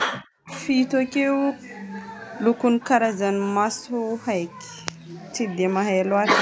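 Right from the start, 0.04 to 0.5 s, the speech gets pushed way down, dropping by something like 40 dB at its deepest and staying clamped for about half a second. That pattern is most likely speech suppressed in double talk: with both ends talking at once, the echo canceller couldn't tell this talker apart from the loudspeaker echo, so it ducked everything, taking the wanted speech along with the echo.

Just as that clamp releases, from 0.49 to 0.62 s, a faint delayed copy of the sound slips through, sitting around 25 dB below the speech and trailing it by 252 ms. That's likely an echo leak: one side is on a loudspeaker, its canceller didn't fully scrub what its microphone picked up, and the leftover got sent back. It's brief and low. The call's microphone processing is doing its usual thing, with nothing above 8 kHz.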